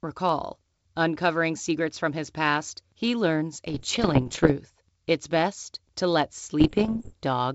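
Speech over a G.722 wideband link has bit errors on an ADPCM link at 3.70–4.54 s, after "his past he learns", and at 6.60–7.14 s, after "best to let". Flipped bits derail the decoder's step size and predictor, giving pops, rough bursts and brief level jumps. The second burst is slightly denser.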